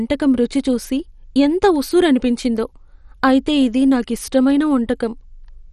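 The speech has most likely passed through MP2 compression at too low a bitrate, which fits a rate near 56 kbps. Throughout the clip, too few bits are shared among the coder's sub-bands, so the upper bands are switched off entirely and nothing remains above 13.2 kHz. The surviving bands are coarsely quantised and drop in and out. The damage is heavy, leaving the speech dull and overlaid with a gurgling, granular distortion.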